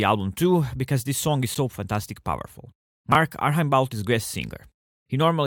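At 1.55 s, between "because this song is" and "fantastic powerful", separately encoded pieces of the speech were joined without trimming the encoder's start delay and end padding. The result is a gap at a join of encoded pieces: a silence of about 11 ms with smeared edges, after which the sound carries on, consistent with pieces about 4 s long.

From 3.12 to 3.15 s, just after "fantastic powerful", a 10 ms chunk was written two chunks late and plays after the chunks that should follow it. These chunks out of order cause a brief jumbled flutter.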